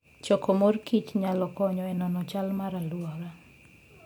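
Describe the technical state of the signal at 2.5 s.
At 2.5 s the speech signal is intact, with no dropout, distortion, glitch or other fault at that point.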